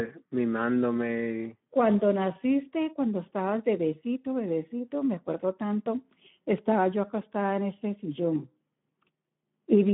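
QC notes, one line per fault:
Throughout: Speex codec damage. A low-bitrate CELP encode, which fits roughly 11 kbps, leaves the speech hoarse and noisy, confined to about 150 Hz to 3.5 kHz, with nothing above 3.9 kHz.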